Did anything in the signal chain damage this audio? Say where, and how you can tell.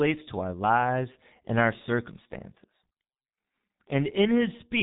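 Yes, at the codec stage: the speech went through a G.723.1 codec, and the damage runs through the whole clip. Nothing survives above 3.8 kHz, and the heavy, hoarse muffling fits a bitrate around 6 kbit/s. The slowly updated voice model smears consonants into a dull, rasping blur.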